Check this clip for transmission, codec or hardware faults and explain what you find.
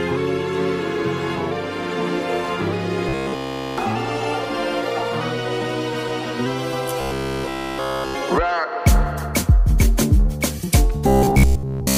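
Three stretches turn into a rigid, metallic buzz near 67 Hz: 3.09–3.78 s, 7.01–8.16 s and 11.08–11.98 s, largely replaced in the last. It is robotic sound from repeated short buffers, likely a roughly 15 ms segment looped while fresh audio failed to arrive.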